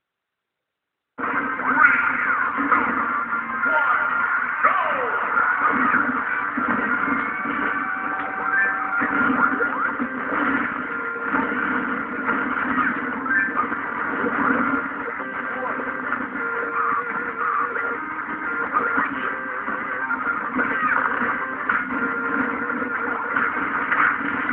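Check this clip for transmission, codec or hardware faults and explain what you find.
No transmission, codec or hardware faults turn up in this clip.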